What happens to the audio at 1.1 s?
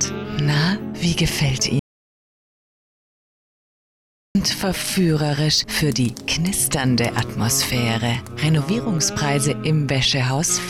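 Nothing goes wrong at 1.1 s; the audio plays through that moment intact, with no dropout, click or distortion.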